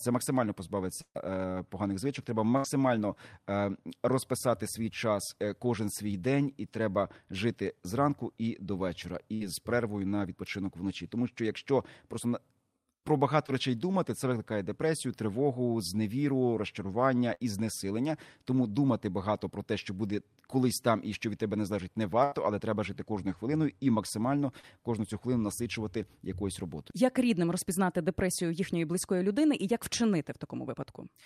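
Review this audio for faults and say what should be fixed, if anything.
Bursts of packet loss at 1.01–1.17, 2.57–2.66, 9.34–9.42, 17.34–17.42 and 22.24–22.34 s: runs of packets were lost or arrived too late, so the receiver stretched the last sound into a fading buzz or hiss, skipping 60 to 140 ms. At 1.01 s it fades fully to silence before the sound resumes.

Short concealed packet loss at 13.46–13.50 and 24.60–24.65 s: 20 to 40 ms never reached the decoder in time, and the filled-in continuation is heard as a brief smear.

To fix this, stabilise the network path and enlarge the jitter buffer, adding forward error correction so lost packets can be recovered instead of concealed.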